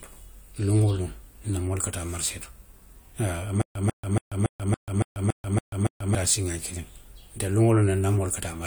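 From 3.62 to 6.15 s the playback likely stalled and kept retrying, producing a stutter with silent gaps: a 144 ms fragment of speech repeats nine times, each followed by about 138 ms of digital silence, pulsing every 281 ms while the intervening speech is lost.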